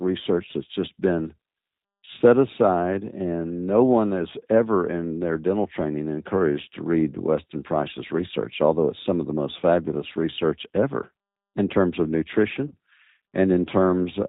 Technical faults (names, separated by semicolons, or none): G.729 codec; VoIP packet loss concealed by the speech codec